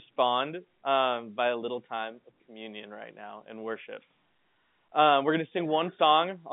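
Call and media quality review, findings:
No faults found; the speech shows a telephone-band signal running from about 150 Hz to 3.6 kHz with nothing above 3.8 kHz, consistent with 64 kbps G.711 A-law coding.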